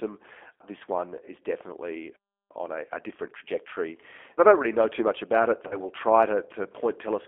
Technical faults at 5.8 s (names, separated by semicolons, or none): G.729 codec; VoIP packet loss concealed by the speech codec